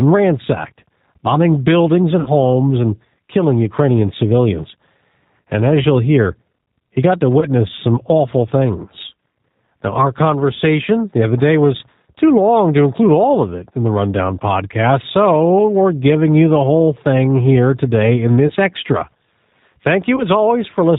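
The speech sounds slightly rough and synthetic throughout, with nothing above 4 kHz, so it is intelligible but thin and buzzy. That is the G.729 codec (the G.729A variant at 8 kbit/s). It rebuilds each 10 ms frame from a vocal tract filter, a pitch predictor and a handful of pulses rather than sending the waveform, and here the damage is plainly audible. At 2.2–2.29 s the voice is stretched into a buzzy tone or coloured noise that fades. The same happens more briefly at 7.4–7.46 s, 18.48–18.53 s and 20.16–20.26 s. This is VoIP packet loss concealed by the speech codec. The decoder extrapolates from its last pitch and filter state and lowers the gain as it goes. The first gap covers about 60 ms of missing audio, which fits three lost 20 ms packets, and the later ones fit a single lost packet each. Because each frame builds on the previous one, the voice stays weak or distorted briefly after each gap.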